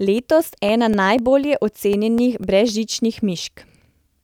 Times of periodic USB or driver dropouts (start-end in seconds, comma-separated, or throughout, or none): 0.18-4.19